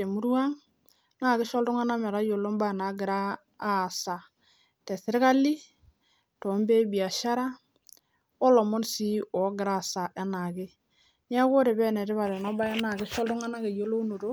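Nothing in the speech stood out as a technical fault on listening.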